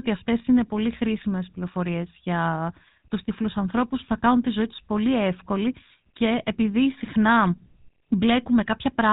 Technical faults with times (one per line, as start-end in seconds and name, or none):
0.00-9.13 GSM full-rate codec